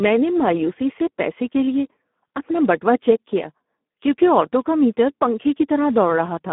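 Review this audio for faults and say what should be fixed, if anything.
The speech sounds hoarse, grainy and buzzy, edging toward robotic, from start to finish. The band is narrow, running from about 200 Hz to 3.5 kHz with nothing above 3.8 kHz, which gives a thin, telephone-like tone. This is heavy Speex codec damage. The CELP coder has too few bits to model the excitation, so the voice's natural texture is replaced by a coarse, noisy approximation, which fits a low 8 kbps mode. To prevent it, run Speex in wideband mode at a higher quality setting, or use a modern codec such as Opus.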